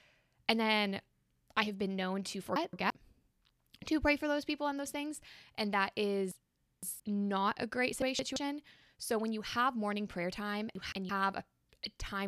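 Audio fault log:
2.56 to 2.90 s, chunks out of order: after "have been known to", a 0.17 s chunk plays one slot late. The sound jumbles briefly.
6.32 to 7.00 s, chunks out of order: a 0.17 s chunk arrives three chunks late. Sound is replayed out of sequence over a longer span.
8.02 to 8.36 s, chunks out of order: after "not a great", one 0.17 s chunk swaps places with the next. The result is a garbled moment.
10.75 to 11.09 s, chunks out of order: after "have morning prayer time", a 0.17 s chunk plays one late. This gives a brief scramble.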